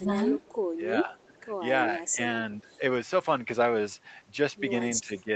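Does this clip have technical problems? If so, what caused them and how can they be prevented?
Yes. Two kinds of fault are audible.

Speech suppressed in double talk: the speech drops in level in pieces at 0.0 to 0.19 s, 0.77 to 1.43 s, 1.99 to 2.81 s and 5.06 to 5.29 s. The deepest drop is about 10 dB in three of these stretches and about 15 dB in the one from 1.99 s. Only part of each stretch is pulled down, roughly 150 to 300 ms. On a waveform the envelope shows sudden notches. On a spectrogram whole frames go darker across the band. The likely cause is an echo canceller that heard far-end sound on the loudspeaker while this side was talking, could not tell the two apart, and attenuated both. A headset, or a canceller tuned for full-duplex double talk, prevents this.

Echo leak: a delayed copy of the speech played on the loudspeaker returns at 2.73 to 2.77 s, about 40 dB below the speech, and at 5.18 to 5.23 s, about 25 dB below it. 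Both scraps lag the original by 323 ms. On a spectrogram this appears as short ghost patches that repeat the shape of the earlier speech, shifted right by that delay. The waveform shows little, since the copies sit well below the speech. The echo canceller on the loudspeaker side likely failed to remove everything its microphone picked up and sent the remainder back. Using headphones, or lowering the speaker volume so the canceller can converge, prevents it.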